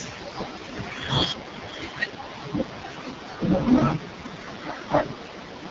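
AMR wideband (HD Voice) codec damage runs through this entire speech clip, with nothing above 7.5 kHz. The coder models speech as pulses driving a vocal tract filter up to 6.4 kHz, then pads the top band with shaped noise. Here the heavy roughness and raspy texture point to one of its two lowest modes, around 6.6 kbit/s, where too few bits remain to describe the pulses and filter accurately.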